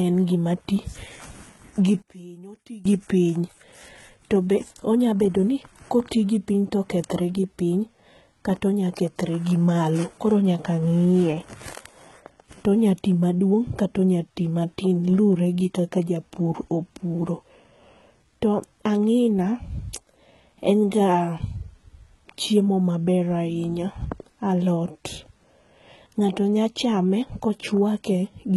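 Speech, with heavy coding damage throughout. The top end stops at about 11.8 kHz, and the treble above the crossover sounds rebuilt rather than recorded. S sounds turn gritty and lispy. This is likely HE-AAC compression, with band replication standing in for the real highs, at a rate that fits about 16 kbps. From 2.02 to 2.85 s the sound collapses, dropping about 22 dB and turning faint. One channel inverted is the likely cause, so the centred sound cancels in the mono sum.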